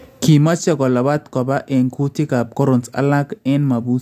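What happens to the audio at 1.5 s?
At 1.5 s you're hearing aliasing, which runs through the whole clip. Content above a fold point near 16 kHz wasn't filtered out before the rate dropped, which fits a 32 kHz conversion, so it mirrors back as faint gritty, metallic tones on the sibilants, roughly 35 dB down.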